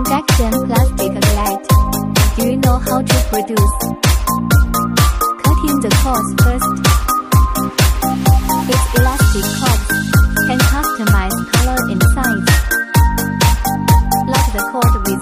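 No faults are audible anywhere in the recording.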